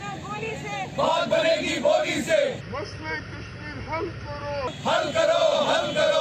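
Wrong sample rate from 2.61 to 4.67 s: the audio drops to about 0.73 times its speed and sinks roughly 5.5 semitones, sounding low and sluggish. Speed and pitch shift together, which fits 44.1 kHz material played at 32 kHz without conversion.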